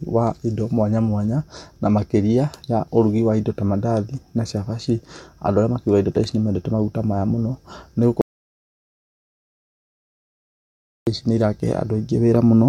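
The input feed to this speech recording was likely lost, so the recorder kept writing silence: an audio dropout to silence from 8.21 s to 11.07 s. For about 2.86 seconds the speech cuts out mid-flow into dead silence with no room tone, and whatever was said there is gone.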